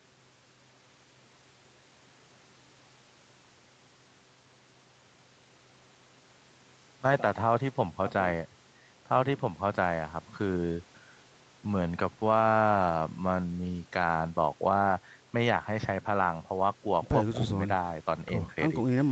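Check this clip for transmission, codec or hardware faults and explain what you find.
Nothing stood out on listening to this speech clip; the top end stops around 8 kHz, as expected for a call path of this kind.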